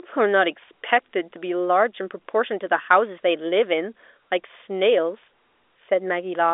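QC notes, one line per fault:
No faults found in this telephone-band speech recording.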